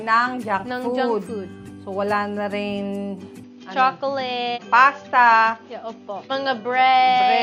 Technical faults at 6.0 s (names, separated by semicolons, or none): input switched to a poorer device